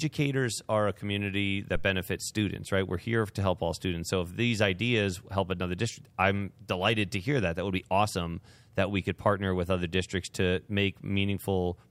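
At 1.75 s, right after "are a community" and before "benefits students right", a deep thump peaking at about -21 dBFS dies away within about 19 ms. This phantom power thump comes from a supply switching on or off on the live input, its voltage step passing through the coupling capacitors.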